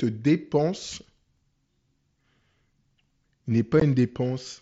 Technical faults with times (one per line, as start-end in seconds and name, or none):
0.99-3.10 periodic USB or driver dropouts
3.80 unconcealed Bluetooth headset packet loss